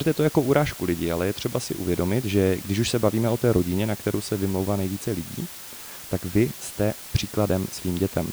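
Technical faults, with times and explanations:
Throughout, low bit depth with dither: the speech is carried by only 6 bits, and dither before rounding turns the error into a steady, even hiss, roughly 15 dB below the speech. Unlike undithered truncation, there is no gritty distortion following the voice.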